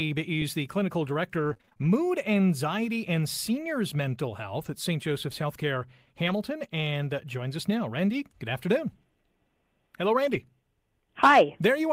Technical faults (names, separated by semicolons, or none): scattered short gaps; lost packet rebuilt from error correction